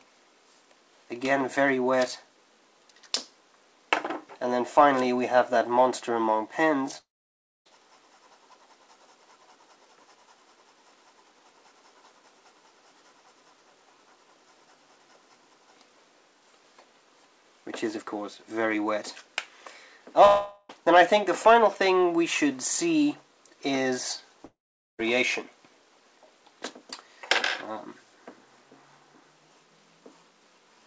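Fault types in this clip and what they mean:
Long network dropout, at 6.98, 20.25 and 24.45 s: the sound breaks off for 0.68, 0.44 and 0.54 s, bridged by a fading continuation of the last sound that sinks into silence in the first and third gaps, likely from packets ceasing to arrive; the missing audio never returns.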